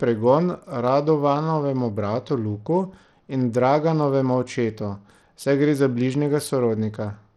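From start to finish the speech carries damage that plainly points to Bluetooth SBC compression as the likely cause, with a coarseness that fits a setting around 80 kbps. The top sub-bands are starved of bits, so the treble thins out and flickers rather than ending at a clean cut-off, and the coarse quantisation leaves a gritty, aliased edge on the voice. That unsteady, sub-band grit sets it apart from a plain low-pass filter or the smeared swirl of MP3.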